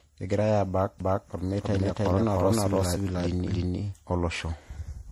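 Throughout, the speech sounds swirly, smeared and hollow, with blurred attacks: generation loss, likely from about four successive MP3 passes at 64 kbit/s. From 1.00 to 3.94 s a doubled audio track appears: a dry, full-band copy at roughly equal level trails by about 300 ms, starting and stopping abruptly, likely from a second out-of-step capture path.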